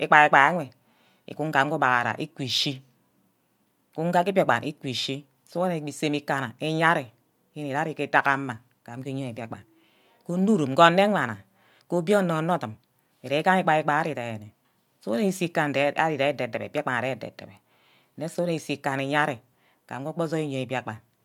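No technical faults can be heard anywhere in this speech recording.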